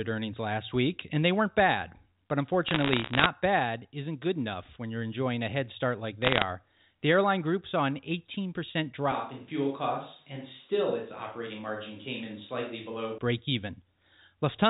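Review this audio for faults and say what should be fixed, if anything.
Bit errors on a digital phone line crackle from 2.68 to 3.26 s and again from 6.22 to 6.42 s, at an error rate well under one percent. Each flipped bit in the G.711 mu-law stream corrupts one sample, so the waveform shows isolated spikes and the spectrogram shows thin vertical lines across the band. A line with error checking, or concealment that replaces corrupted samples, would prevent this.

From 9.12 to 13.18 s the speech turns hollow and roomy, drops about 5 dB, and sits over room noise roughly 35 dB down. This is most likely a switch to a distant microphone. The waveform steps down abruptly, and the spectrogram loses low-frequency energy while gaining reverberant smearing. Monitoring the close microphone's feed during recording would prevent the switch.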